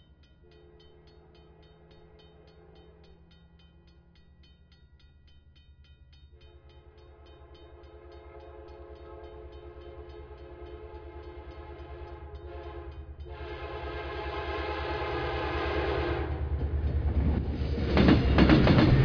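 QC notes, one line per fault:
Nothing to flag here; I didn't hear anything go wrong anywhere in this one.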